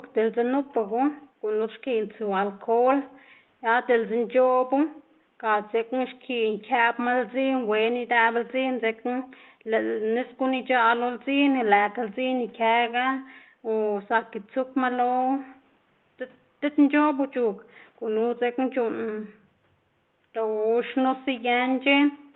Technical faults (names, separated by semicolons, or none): none